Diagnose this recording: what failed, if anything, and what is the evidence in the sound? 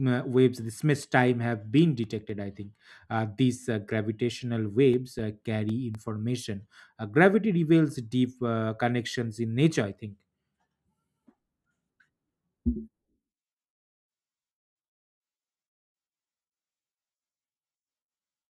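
CD scratch ticks at 1.03 to 2.80 s and again at 4.94 to 5.95 s point to a playback-stage failure. The first run starts just after "waves the" and ends before "uh these uh gravitational", and the second follows that phrase. They are eight and then five brief ticks, each a few milliseconds at most, about five a second. A blemish on the disc defeats error correction once per revolution, so the player patches or mutes the lost samples.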